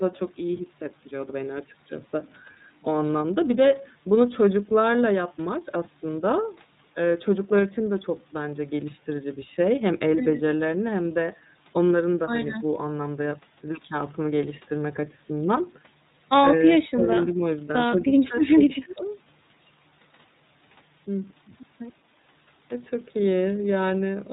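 From start to finish the speech carries the character of the iLBC codec: nothing reaches above 4 kHz, and each frame's excitation is coded on its own, leaving a slightly rough, synthetic edge. The texture fits 30 ms frames at around 13 kbps. On a spectrogram the energy stops flat at 4 kHz, and the harmonics look smeared and grainy rather than cleanly striped.

Between 16.79 and 19.04 s the voice is pulled down four times, likely speech suppressed in double talk, where an echo canceller confused the talker with far-end echo and attenuated both. The dips fall at 16.79–17.08 s (deep, about 25 dB), 17.27–17.43 s (slight, about 5 dB), 18.06–18.35 s (about 10 dB) and 18.52–19.04 s (near-dropout, about 35 dB). The waveform shows notched envelope gaps, and the spectrogram shows faded vertical bands.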